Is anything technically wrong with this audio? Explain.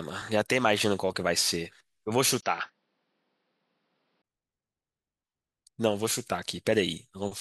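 Yes. Input switched to a poorer device, from 2.41 to 4.24 s: the recording likely moved to a narrower-band microphone. After a 20 ms gap, the speech turns dull, loses everything above 5.9 kHz, drops about 5 dB and gains a faint new noise floor, then clears again.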